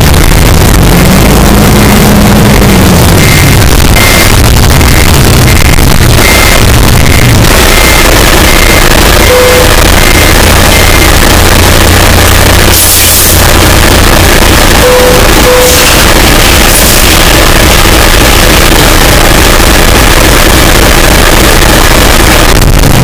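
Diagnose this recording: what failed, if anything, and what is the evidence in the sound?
The sample-format conversion stage failed for the whole clip: the sound is very loud and harsh, with background noise as loud as the foreground, yet pitch can still be followed. The likely cause is float read as integer, with 32-bit float samples read as 32-bit integers so that sign and exponent bits set each value. The waveform is nearly square at an almost fixed high level, and the spectrogram shows dense broadband energy.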